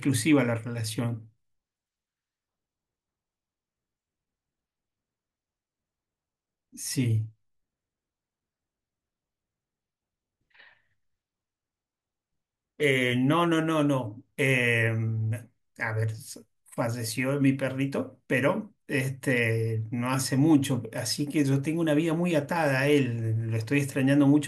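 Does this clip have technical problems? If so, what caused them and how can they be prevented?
No, nothing in this speech recording stood out as a technical problem on listening, so there is no cause to trace and nothing to prevent.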